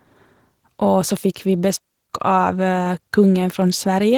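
Throughout the speech, Opus voice compression is plainly audible. The coder runs in hybrid mode, with linear prediction below 8 kHz and a transform layer above. The band reaches about 20.2 kHz. The coarse excitation makes the voice hoarse and slightly robotic. That fits a rate near 16 kbps.

From 1.76 to 2.09 s comes a digital wireless dropout. The link lost too much data, so the receiver muted for about 0.33 s. It is a clean hole of near silence. No noise burst comes before or after it.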